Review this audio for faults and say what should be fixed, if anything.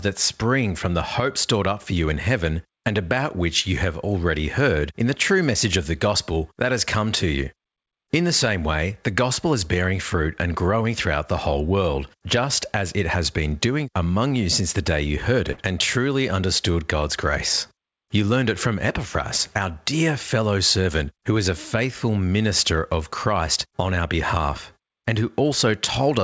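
There's a burst of packet loss at 15.52 to 15.59 s, right after "the day you heard" and before "and truly understood". A short run of packets went missing, so the receiver stretched the last bit of sound for about 55 ms, fading it out, and then picked back up with roughly 60 ms of speech simply gone. The join sounds like a brief smeared hold followed by a small skip. The band-limited sound, with nothing above 8 kHz, fits a wideband call codec such as G.722. To prevent it, add forward error correction or redundancy on the link, and give the jitter buffer a bit more headroom so late packets still arrive in time to play.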